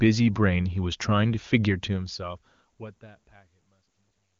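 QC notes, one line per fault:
No faults heard.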